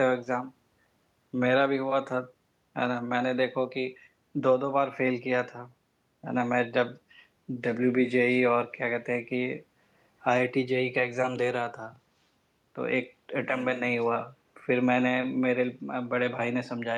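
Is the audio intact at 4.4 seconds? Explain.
Yes, the audio is intact at 4.4 seconds, with no fault audible at that point.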